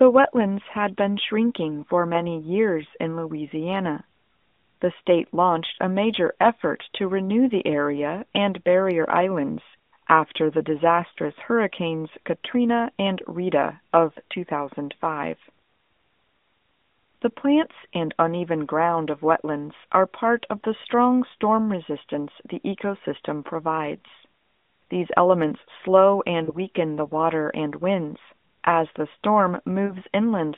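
Lost AMR speech frames occur at 5.76 to 5.80 s, after "state launched", and at 11.14 to 11.19 s, after "barrier islands after the", each fitting one 20 ms frame. Two-frame losses follow at 26.44 to 26.57 s, after "elements slow", and at 29.86 to 29.95 s. Each time, the decoder carried the last pitch and vocal tract settings forward at falling gain. The single-frame losses give a brief smeared warble or dip, and the two-frame runs are drawn out and fade toward silence, rather than the hard silence or click of a plain dropout, with the sound returning briefly weak, all within the narrowband telephone band.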